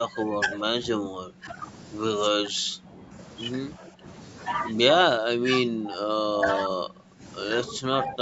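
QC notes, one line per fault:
0.00–0.66, 0.96–1.58, 2.31–3.14, 3.79–4.06, 5.16–5.50, 5.66–7.23, 7.71–7.84 and 8.05–8.22 s: speech suppressed in double talk. The speech dips by about 15 dB, and by about 25 dB across 5.16–7.23 s. The likely cause is the echo canceller ducking the near talker while the far side also spoke.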